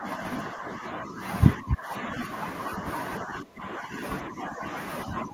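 Speech suppressed in double talk at 0.0–0.2, 0.54–1.2, 1.56–2.22, 3.22–4.02, 4.24–4.64 and 5.05–5.34 s: the talker dips by roughly 5 to 15 dB, likely an echo canceller mistaking overlapping speech for echo.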